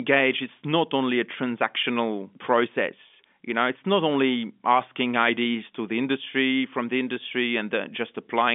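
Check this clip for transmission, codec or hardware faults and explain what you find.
Nothing found: the speech sits in a telephone band of about 200 Hz to 3.5 kHz with nothing above 3.7 kHz, which fits G.711 A-law at 64 kbps working as intended.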